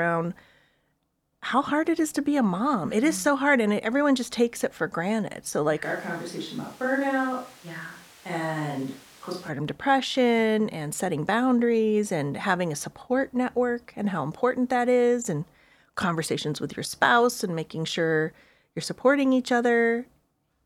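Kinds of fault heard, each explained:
switch to a distant microphone: from 5.9 to 9.5 s the speech abruptly turns roomy and thin, about 5 dB quieter and noisier, likely a far-off mic.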